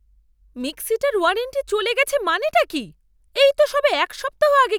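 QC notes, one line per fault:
No faults heard in this speech clip.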